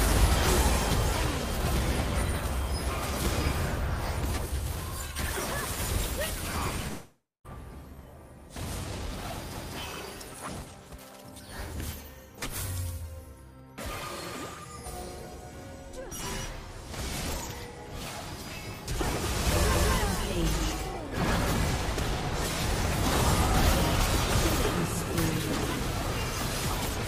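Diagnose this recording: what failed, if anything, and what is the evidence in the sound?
Network stage: a long network dropout is the likely cause of the break from 6.87 to 7.46 s. About 0.58 s of audio never arrives. The receiver's concealment stretches the last sound into a fading buzz or hiss, leaving about 0.2 s of silence before the audio resumes further on, with the lost part gone. The fading synthetic tail and the skip forward distinguish this from a short packet-loss glitch or a plain storage gap, which would cut straight to silence.

Buffer or chunked processing stage: overlapping chunks cause a stutter at 9.55 s and again at 19.75 s. At each join about 200 ms of audio plays twice, because each new chunk starts before the previous one has finished. The 10 s spacing matches a 10 s chunk length. Unlike the dropout, nothing is lost here. The material is repeated, and the exactly regular spacing rules out random network or codec errors.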